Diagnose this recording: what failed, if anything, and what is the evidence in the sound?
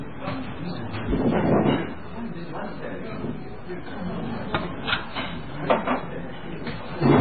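There's a DC offset running through the whole clip. The waveform sits shifted off zero by a constant amount, probably from the analogue front end or the converter. You won't hear it as such, but it eats headroom and shows up as steady energy right at the bottom of the spectrum.

The band-limiting and smearing throughout sound a lot like MP3 compression at the codec stage, likely the cause here. Nothing gets past 4.5 kHz, and the damage is heavy, with watery, swirly texture and soft attacks. That fits a very starved bitrate, something like 16 kbps.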